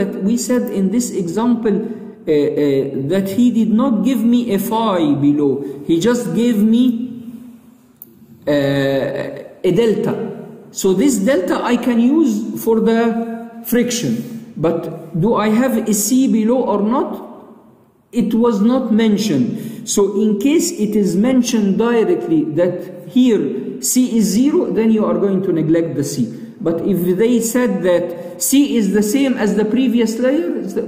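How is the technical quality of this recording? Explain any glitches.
No glitches can be heard anywhere in the recording. There is nothing in it that calls for an explanation.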